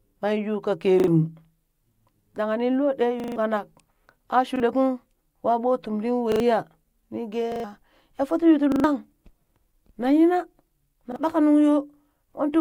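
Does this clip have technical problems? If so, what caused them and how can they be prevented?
Yes. Repeated buffer stutters occur at 1.0–1.08 s (just after "yuu ka"), 3.2–3.36 s, 4.56–4.6 s (just before "kung wa ɓoo"), 6.32–6.4 s, 7.52–7.64 s, 8.72–8.84 s and 11.12–11.16 s (just before "ɓaka nuŋ"). Each time, fresh audio arrived late and the device replayed its last block one to four extra times. The hard-joined repeats fit a 40 ms buffer and drop up to roughly a sixth of a second of speech. A larger playback buffer, or a capture and delivery path that keeps up in real time, prevents this.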